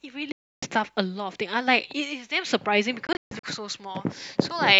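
At 0.32 s the speech cuts to silence until 0.63 s, a gap of about 0.3 s. At 3.07 s it breaks up again. Several short holes are spread over about 0.37 s, and the longest lasts about 0.14 s. Each time the speech resumes further along, as if it had kept playing unheard. This is likely a Bluetooth dropout, where audio packets failed to reach the headphones in time and were discarded.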